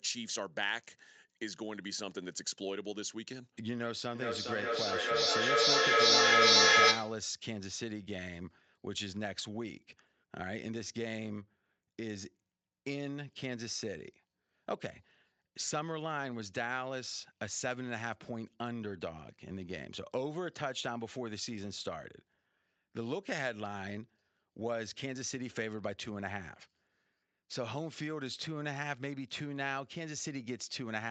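From 4.15 to 7.3 s the speech keeps coming back at a steady interval of roughly 0.4 seconds, each return thinner and more ringing, swelling to about 13 dB louder than the speech itself. This is feedback echo between two devices: a second device on the same call plays the audio aloud, the first microphone hears it again, and neither echo canceller removes sound from the other device's loudspeaker. Throughout, the sound is band-limited at 8 kHz, which fits an Opus call link.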